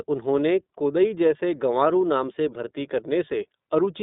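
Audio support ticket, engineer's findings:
iLBC codec damage, throughout: narrowband, slightly rough, synthetic speech. Spectrogram shows a hard ceiling near 3.7 kHz, little below 200 Hz, and blocky frame-to-frame texture. Likely a VoIP leg using iLBC's 30 ms, roughly 13 kbps mode.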